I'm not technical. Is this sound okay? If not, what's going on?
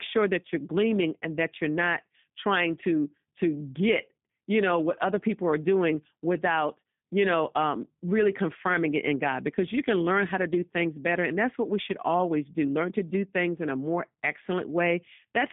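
No. The speech has gone through the G.729 codec, a compression scheme used for internet phone calls, and the damage is plainly audible from start to finish. Instead of sending the actual sound, it sends a rough description of the voice every few thousandths of a second and rebuilds the speech from that, so the speech sounds slightly rough and synthetic. It also keeps only a narrow phone band, with nothing above about 3.7 kHz, which leaves the voice thin and muffled.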